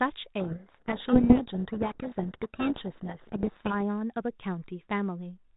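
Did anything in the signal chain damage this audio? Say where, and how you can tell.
Yes, in the codec. Harsh distortion buries the speech from 0.4 to 3.74 s. This is a codec payload misread: G.726 code words decoded in the wrong bit order.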